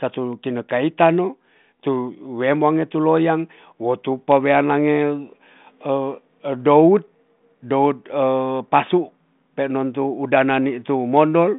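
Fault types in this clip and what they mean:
No faults are present: the speech comes through a G.726 ADPCM telephone path at 40 kbit/s, confined to a line band of roughly 150 Hz to 3.7 kHz with nothing above 3.8 kHz, and the coding leaves at most a faint trace on the sound.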